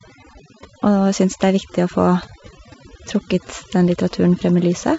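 Throughout the clip, overdone noise removal has driven the reduction far too hard, switching off individual frequency bands whenever they sit near the noise estimate and taking the softer parts of the speech with them. The background collapses into near silence dotted with twinkling specks.

From 3.87 to 3.91 s, bit errors on an ADPCM link flip bits in the G.722 stream at a low rate, around a fifth of a percent. Each flipped bit also knocks the decoder's step size and predictor off track, so the damage rings on briefly and is heard as pops and rough bursts with short jumps in level. The codec itself sounds clean, which fits its full-rate mode.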